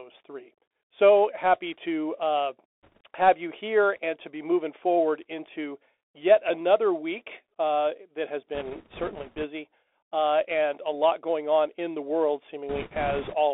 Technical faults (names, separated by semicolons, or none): Bluetooth CVSD headset codec; bit errors on a Bluetooth voice link